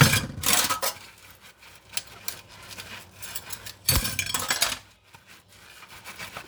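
No technical fault can be heard anywhere in this recording of sounds. Nothing in it breaks up, drops out or shifts in level or pitch at any point.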